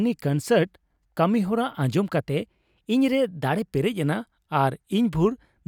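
From 2.20 s to 3.75 s the speech suddenly runs about 6% faster and about 104 cents (roughly a semitone) higher, then snaps back to normal pitch and pace. This is a drift correction step, likely clock-matching software briefly raising the playback rate to drain its buffer. On a spectrogram the harmonic stack jumps upward at 2.20 s and drops back at 3.75 s. In the waveform, the periods in that stretch are correspondingly shorter.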